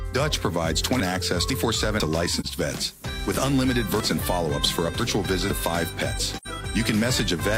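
From 1.0 to 2.0 s, chunks out of order: a 500 ms chunk plays one slot late. The sound jumps at the hard joins.

At 2.40 s comes AAC frame loss with muting. A 43 ms gap fades softly out and back in.

From 4.0 to 5.5 s, the chunks are out of order again. A 500 ms chunk arrives two slots late, so the passage sounds jumbled.

At 6.35 to 6.47 s, there is another muted AAC loss of about 85 ms, which fits two lost frames. It is a soft-edged hole.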